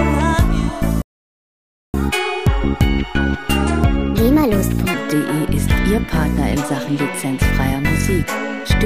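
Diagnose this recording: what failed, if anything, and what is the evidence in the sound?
A playback stall at the player stage silences the output from 1.02 to 1.94 s, a gap of about 0.92 s, before the sound resumes. The likely cause is the player's buffer running dry or its output thread being blocked until it recovered.

Catch-up at higher speed follows in playback from 1.94 to 4.94 s. The player resamples its backlog at 1.25 times normal speed, so tempo and pitch both rise, pitch by about four semitones, until part of the lost time is recovered and normal rate returns.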